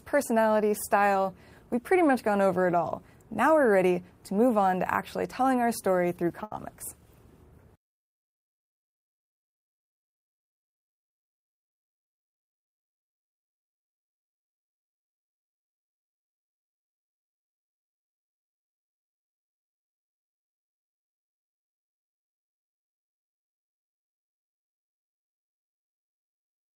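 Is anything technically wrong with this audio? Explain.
Yes. From 6.43 to 6.52 s there is a short stall from a late packet: a packet arrived late, so the jitter buffer ran dry. The receiver held the last sound for about 80 ms, then resumed with nothing lost, leaving a brief drawn-out moment with a faint buzz or dip.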